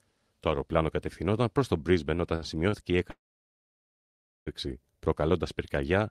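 Around 2.35 s there's a short stall from a late packet: the jitter buffer ran dry, so the receiver stretched the last bit of sound for about 61 ms until the packet showed up, running to 2.44 s. A second, smaller one hits at 2.70 s, held for about 28 ms. Nothing's actually lost either time. You just hear the sound hang a touch too long with a faint buzzy smear, and everything after it lands that much later.

Then at 3.10 s comes a proper call audio freeze, lasting until 4.49 s. The last sound gets carried on briefly and dies away, and most of that stretch, roughly 1.3 s, is plain silence. The likely cause is packets getting held up in transit long enough to empty the buffer completely. When they arrive, playback picks up right where it stopped, so it's a 1.36 s hole inserted into the stream rather than a chunk cut out of it.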